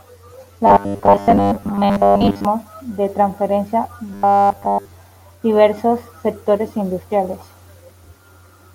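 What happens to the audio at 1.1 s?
At 1.1 s the speech has robotic sound from repeated short buffers, from 0.67 to 2.45 s, ending just before "de transferencia". Most of the audio is replaced by rapid repeats of a tiny slice, likely one of about 10 ms. This forces a rigid, metallic buzz near 100 Hz onto the voice.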